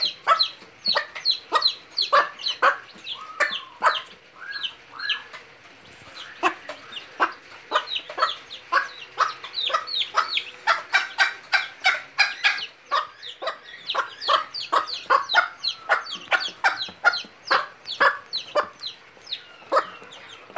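No technical faults can be heard anywhere in the clip. There is nothing to place in time order, because no moment stands out as a fault.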